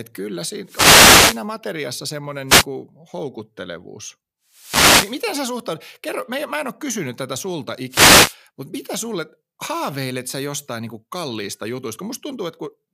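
Wireless microphone noise hits occur at 0.64–1.47 s, 2.47–2.66 s, 4.48–5.31 s and 7.89–8.37 s: the radio link to the speech microphone fades as reflected signals cancel, so receiver noise surges into brief swishes of static, breaking into clicks where the fade runs deepest.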